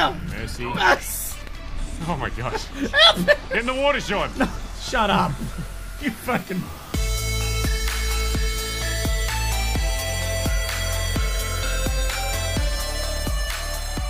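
No technical faults can be heard anywhere in the audio. Nothing in the sound calls for a time or a value to be marked.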